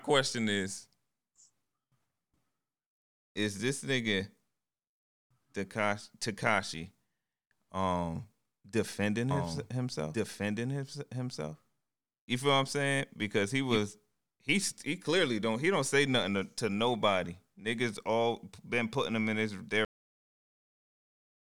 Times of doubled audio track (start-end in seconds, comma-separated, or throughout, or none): 9.31-13.77